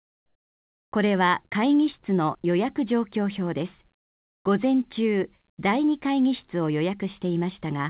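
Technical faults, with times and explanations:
0.00–0.92 s, comfort noise in place of the background: the opening pause is a flat, featureless hiss about 14 dB quieter than the real room, likely because the sender stopped transmitting during silence and the receiver filled in synthetic noise until the sound resumed.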